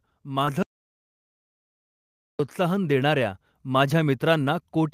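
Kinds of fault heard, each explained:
Short concealed packet loss: Near 0.45 to 0.49 s, a sliver of the speech arrived too late for the decoder to use. About 20 ms went missing. The receiver patched roughly 14 ms of it by extending the preceding sound, then blended back into the real signal. The patch is heard as a brief smear or wobble in the voice. The flow is simply blurred for an instant before clean speech resumes.
Audio dropout to silence: At 0.63 s the speech cuts off abruptly. Silence follows, with no room tone or background underneath. The sound returns mid-flow at 2.39 s. That is about 1.77 s of the recording simply gone, and whatever was said during the gap cannot be recovered. The likely cause is a lost input, such as a disconnected device or a failed link. The recorder kept writing silence until the signal came back.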